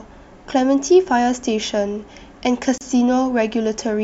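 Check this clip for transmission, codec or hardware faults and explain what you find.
There's one fault in this speech clip, a gap at a join of encoded pieces. At 2.78 s the sound drops out for about 31 ms, then carries on where it stopped. Separately encoded chunks, roughly 4 s apart, were joined untrimmed, leaving encoder delay and end padding as smeared silence.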